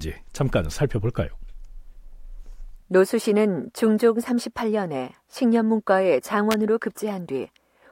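A nearby switch, motor or static discharge likely arced, and the audio line picked up that burst as an electrical switching spike. From 6.51 to 6.54 s it lands on top of the speech as a sharp snap, peaking at roughly -5 dBFS.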